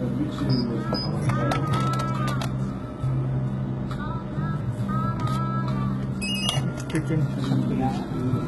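HE-AAC compression, throughout the clip, is the likely cause of treble that sounds bright yet synthetic, with nothing above 11.8 kHz. The upper band appears copied up from lower frequencies rather than coded, giving heavy gritty, metallic damage that fits roughly 16 kbps.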